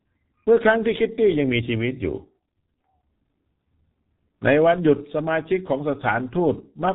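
Throughout, heavy G.723.1 codec damage removes everything above 3.8 kHz, a flat spectrogram ceiling. Coarse frames fitting about 6.3 kbit/s leave speech muffled, hoarse, with smeared consonants.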